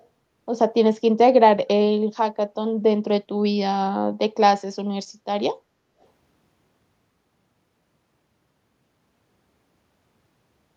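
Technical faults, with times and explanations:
0.00–0.05 s, echo leak: a very faint copy of the speech trails 305 ms behind, likely from a speakerphone whose echo canceller let a scrap slip back.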